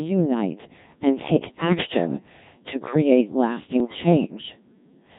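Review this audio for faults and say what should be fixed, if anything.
The whole speech track has passed through the Codec 2 vocoder, and the damage is heavy. The voice is rebuilt from sine waves, so it sounds buzzy and robotic, at a rate that points to about 1.3 kbit/s. On a spectrogram, harmonics sit as rigid, evenly spaced lines with smeared, blocky formants. The waveform has lost its original shape. Keep a higher-rate or waveform codec in the chain wherever quality matters.

Bit errors on digital voice radio hit from 1.65 to 1.94 s and from 3.80 to 3.98 s. Flipped bits corrupt the pitch, level and spectral parameters, turning each stretch into warbles and bleeps. The two lengths fit roughly six and three vocoder frames, with an error rate of several percent. A spectrogram shows abrupt harmonic jumps and level steps there. Stronger forward error correction or a better link margin would prevent this.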